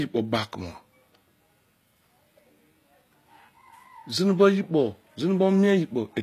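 Throughout, the treble sounds synthetic and gritty, with s sounds turned metallic and nothing above 14.9 kHz, likely HE-AAC compression at a low bitrate near 24 kbps.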